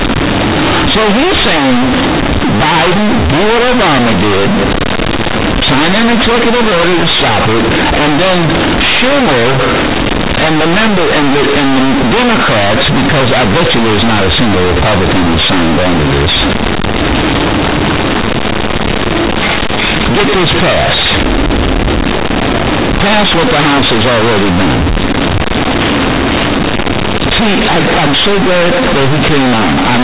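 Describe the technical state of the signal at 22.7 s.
At 22.7 s you're hearing companded audio read as linear, and it runs the whole clip. The A-law bytes are played as plain 8-bit samples without expansion, so quiet speech swings as wide as loud, giving very loud, buzzy distortion and strong noise in pauses, all within the 4 kHz telephone band.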